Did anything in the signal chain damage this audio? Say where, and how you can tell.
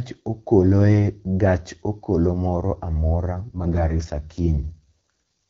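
Yes. An AMR rate drop at the network stage runs from 3.36 to 5.10 s. The speech turns rough and synthetic without a gap or narrower band, which fits the link forcing AMR-WB from 12.65 to 6.6 kbit/s to buy error protection. A spectrogram keeps its bandwidth but shows smeared, blurred harmonics.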